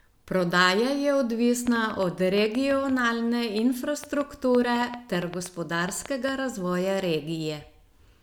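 A train of clicks runs from 1.67 to 6.30 s: about thirty pulses of much the same shape, arriving unevenly at 5.4 per second, peaking about 10 dB above the speech and ticking through pauses too. This likely comes from interference from nearby equipment or a faulty connection or power supply.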